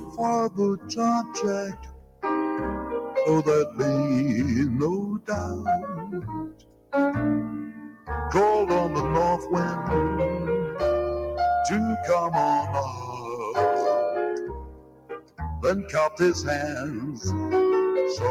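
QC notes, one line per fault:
Throughout: noise suppressor applied to music or sounds. A speech-tuned suppressor stays active and keeps misjudging sustained parts of the sound as noise, so the level swings by about 10 dB as it clamps down and lets go. It follows how steady the sound is, not how loud, which separates it from compressor pumping. Onsets pass intact while held material and tails thin and flutter.
0.0–0.19 s, 0.77–0.95 s, 1.68–2.24 s, 5.58–6.93 s, 7.66–8.1 s, 12.89–13.29 s, 14.4–15.41 s, 15.82–16.2 s: sound cut by the noise suppressor. In each span the suppressor pulls the sound down harder than elsewhere, from about 7 dB at 12.89 s to about 18 dB at 5.58 s and 14.4 s. The longest dips last about a second. The sound sinks and recovers smoothly instead of vanishing, which distinguishes it from a dropout. Decays end early while attacks remain.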